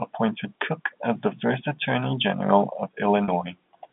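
At 3.24 s the speech briefly holds on a slightly buzzy, sustained tone for about 40 ms before carrying on. This is packet loss with pitch repetition. A gap, which fits two lost 20 ms packets, was bridged by repeating the last pitch period, heard through the G.711 telephone band.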